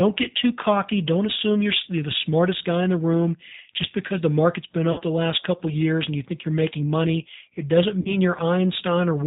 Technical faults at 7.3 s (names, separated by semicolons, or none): G.729 codec